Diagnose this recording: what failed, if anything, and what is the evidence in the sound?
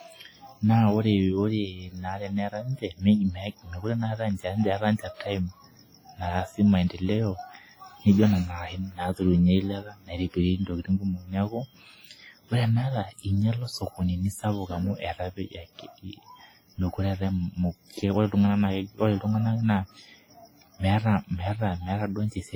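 Codec stage: heavy ringing, washy smear and hiss that follows the signal across the whole speech, likely WMA compression fitting about 24 kbps, continuous rather than gapped like packet loss.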